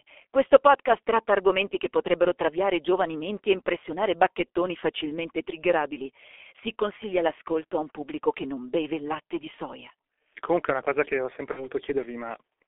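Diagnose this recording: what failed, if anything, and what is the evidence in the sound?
Codec stage: G.723.1 compression throughout, a 300 Hz to 3.4 kHz telephone band at 6.3 kbit/s, gives hoarse, muffled speech and smeared consonants, unlike a plain band-limiting filter.

Network stage: VoIP packet loss, concealed by the speech codec, from 11.51 to 11.68 s after "una cosa che ho". About 60 ms are lost, which fits two 30 ms frames. The gap is a fading extrapolation of the last voice sound rather than silence, with weak recovery afterwards.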